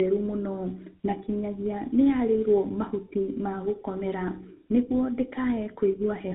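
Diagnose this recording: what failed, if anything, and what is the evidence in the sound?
Tandem speech coding at the codec stage: the speech has passed through two speech coders in sequence, and it sounds rougher, more muffled and more warbly than one coding pass would leave it. Nothing is present above 3.8 kHz for the whole clip. The sound is consistent with a CVSD link, then G.711 mu-law, then GSM full rate, with each coder re-encoding the previous one's decoded errors so the damage compounds.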